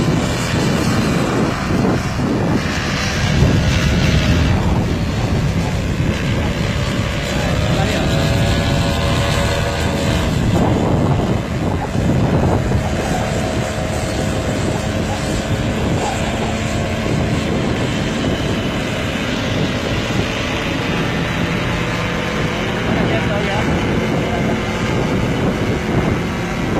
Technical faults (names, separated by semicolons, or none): mains buzz